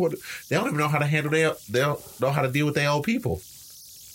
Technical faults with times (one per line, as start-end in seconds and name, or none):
0.00-4.14 converter idle tones